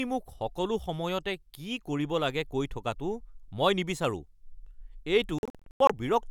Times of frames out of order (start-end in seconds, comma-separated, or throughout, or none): none